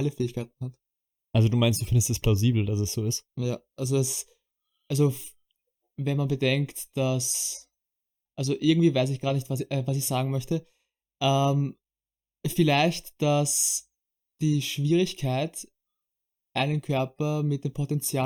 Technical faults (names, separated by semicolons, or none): channel delay (comb filtering)